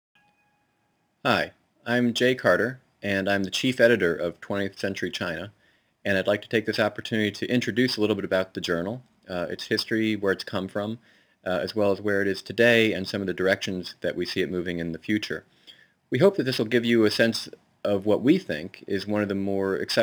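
From start to finish there's crude rate conversion: samples look to have been dropped rather than filtered, which fits a 48 kHz to 44.1 kHz change. The resulting error sits roughly 30 dB down, a gritty, inharmonic fizz riding on louder and brighter sounds.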